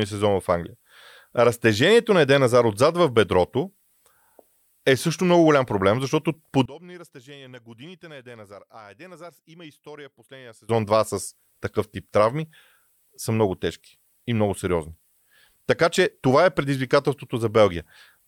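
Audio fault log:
6.66–10.69 s, one channel inverted: the speech collapses by about 24 dB into a faint residue rather than silence, which sets it apart from a dropout or fader dip. Likely one channel's polarity flipped, cancelling the centred content on mono summing.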